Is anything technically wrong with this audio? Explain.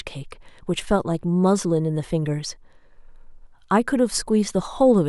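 Yes. Word clock ticks, 0.82 to 4.98 s: an unlocked receiver, drifting likely around 15 ppm, slips one sample about every 1.5 s, giving roughly four clicks.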